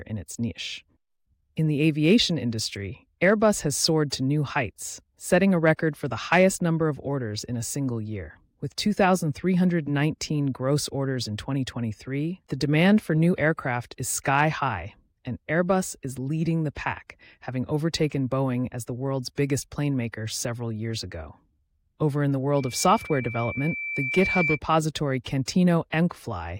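Speech clip with loudspeaker feedback squeal from 22.57 to 24.60 s, right after "in the": a 2.3 kHz tone swells over about two seconds to roughly speech level as the mic-to-speaker loop exceeds unity gain there. Spectrograms show a brightening horizontal line; waveforms show a growing envelope.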